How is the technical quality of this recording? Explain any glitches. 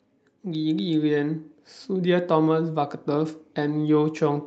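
The speech carries one clear fault: an automatic gain rise. It sits on a call-codec path whose top end stops near 8 kHz, and the coding texture fits an Opus stream at a modest rate of about 32 kbps.

From 0.43 s to the end, automatic gain rising is audible. The gain control judged the input too quiet and kept raising its amplification. Voice and background noise therefore swell together, slowly and steadily, rather than the talker simply getting louder.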